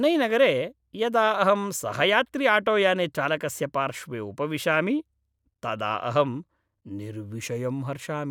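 Nothing stood out as a technical fault on listening to this speech recording.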